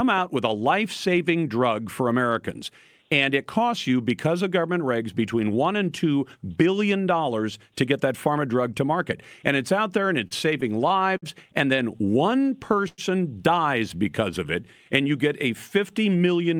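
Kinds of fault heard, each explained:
Repeated stalls (stutter): Packets kept arriving late, so the jitter buffer ran dry six times between 10.27 and 11.24 s. Each time the receiver held the last speech sound going until data came in again, about 124 ms of filler in all, the longest single gap 56 ms. Nothing is lost, but roughly an eighth of that second is padding, so the speech drags and catches in a halting stutter.
Short stall from a late packet: A single packet missed its playout time, leaving the buffer empty, and the receiver stretched the preceding sound until it showed up, then resumed exactly where it stopped. At 11.76 to 11.80 s the hold is only 15 ms. At 12.88 to 13.00 s it is 97 ms, long enough to hear a sound held unnaturally with a faint buzz or dip before speech continues.
Jitter buffer slow-down: With its reserve running low, the buffer built delay by repeating individual pitch periods and slivers of pause many times over. 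Between 12.05 and 12.81 s this adds 69 ms, playing speech at 92% speed. Between 13.96 and 14.89 s it adds 67 ms, at 94% speed. Pitch stays put, but the speech sounds slowed and drawn out.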